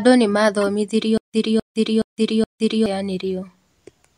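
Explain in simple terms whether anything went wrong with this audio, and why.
Two kinds of fault are audible in this speech. The first is a corrupt frame decoded, at 0.61 to 0.68 s and again, more faintly, at 3.27 s. Damaged compressed data was played anyway, so energy landed at the wrong frequencies and came out as short squeaky blips.

The second is a stutter with silent gaps, from 1.18 to 2.86 s. The same 0.26 s fragment of sound repeats four times, every 0.42 s, with about 0.16 s of dead silence between repeats. The likely cause is a stalled stream replaying its last piece, and the speech meant for that stretch is lost.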